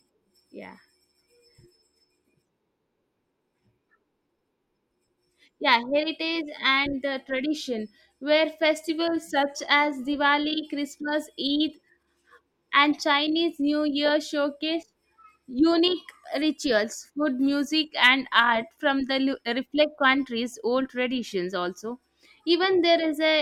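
A clock-matching stage likely stepped the playback rate to correct drift, producing two drift correction steps in this speech. From 8.90 to 9.56 s the rate falls by 6.15%, so the sound slows and drops about 110 cents, just over a semitone, before snapping back. From 16.28 to 16.84 s the opposite step raises the rate by 6.15%, lifting pitch about 103 cents and hurrying the delivery until it returns to normal.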